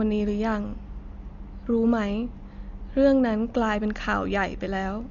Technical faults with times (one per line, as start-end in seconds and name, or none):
0.00-5.10 Dolby Digital compression